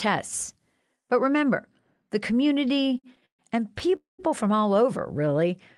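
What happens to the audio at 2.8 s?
Right after "remember the", from 2.65 to 3.41 s, the speech catches and drags in a rapid stutter, with sounds briefly held and smeared before it moves on. These are repeated stalls (stutter): packets arrived late, so the jitter buffer ran dry eleven times, and the receiver stretched the last sound to cover each gap, about 273 ms in all and up to 132 ms at once, roughly a third of the span. Nothing is actually lost, only delayed.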